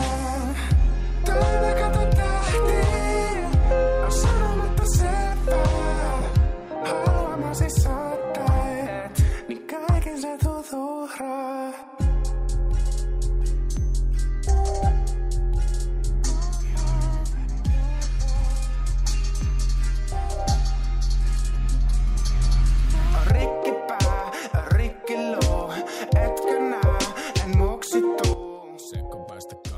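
At 28.34 s the level drops abruptly by about 12 dB and stays down until the clip ends at 29.78 s. This is a sudden gain jump. The sound and the background noise fall together in a single step, with no fade between the two levels, so the cut is heard as an instant step down rather than a gradual change. The likely cause is a digital gain setting applied from one sample to the next without a ramp.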